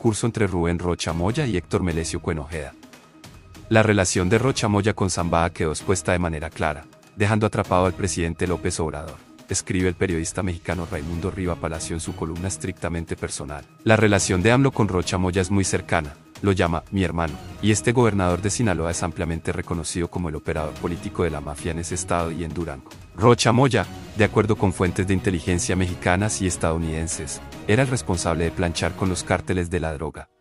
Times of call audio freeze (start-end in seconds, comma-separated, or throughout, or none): none